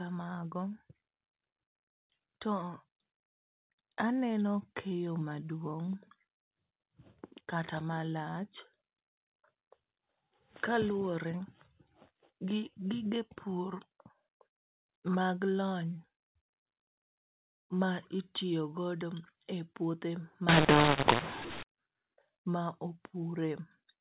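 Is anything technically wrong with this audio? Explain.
Yes. From 20.49 to 21.63 s, just after "itiyo godo e puothe", the speech turns harsh and gritty: a mu-law and A-law mix-up. Audio encoded with the mu-law curve is being expanded with the A-law curve, so each 8-bit code maps to the wrong level. Loud and soft samples are rescaled inconsistently, and near-silent samples are pushed well above zero. The gaps between syllables fill with noise. On a waveform, the envelope looks jagged and the quiet stretches never settle to a flat line. On a spectrogram, broadband distortion smears across the whole band during that span. It stays capped near 4 kHz, matching the telephone coding heard across the rest of the clip.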